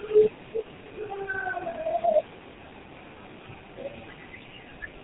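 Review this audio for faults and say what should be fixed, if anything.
The G.723.1 codec runs through the whole speech recording. Its heavy coding, consistent with a rate of about 6 kbit/s, discards everything above 4 kHz and updates its vocal model slowly, leaving the voice muffled and hoarse with smeared consonants. Prevent this by carrying the call on a wideband codec at a higher bitrate.

VoIP packet loss concealed by the speech codec appears from 0.62 to 0.68 s. A missing packet, which fits a single lost 30 ms frame, forced the decoder to extend its last pitch and filter at falling gain. The result is a brief buzzy or noisy, fading stretch and weakened sound as the decoder recovers. Prevent this with a jitter buffer and forward error correction on a more reliable network path.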